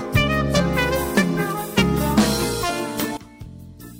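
At 3.17 s the audio suffers a sudden gain jump, dropping about 19 dB instantly, likely from a setting change applied without a ramp; unlike a fade, sound and background noise fall together with no gradual slope.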